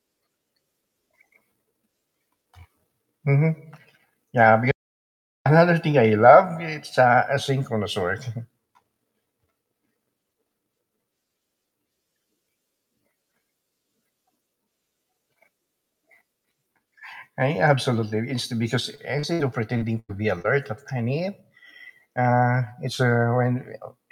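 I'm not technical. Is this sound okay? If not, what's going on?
No. There are several faults.

First, an audio dropout to silence from 4.71 to 5.46 seconds. The sound cuts off completely for about three quarters of a second. There's no background hiss, just dead silence. Then the speech comes back mid-flow. This likely happened because the microphone or its connection briefly lost the signal while recording carried on. Whatever was said in that gap is gone for good.

Next, two bits of short concealed packet loss, at 18.95 to 18.99 and 19.19 to 19.25 seconds. This is a call-style problem. Tiny pieces of the audio, about 20 and 40 milliseconds, never arrived. The receiving end covered each hole by stretching the sound just before it. You hear a quick smear or wobble, and a short sound can drop out.

Right after, at 19.33 to 19.41 seconds, comes a burst of packet loss. This time about 60 milliseconds went missing in one go. 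The system again stretched the last sound and let it fade. So you get a brief buzz or hiss. Then the speech jumps ahead, with a small piece skipped.

Finally, from 19.77 to 20.46 seconds, there's repeated packet loss, which gives a robotic sound. The audio broke up four times in under a second. The longest hole was nearly a tenth of a second. About a quarter of that stretch is patched-in filler rather than real speech. That's why it sounds choppy, with bits missing.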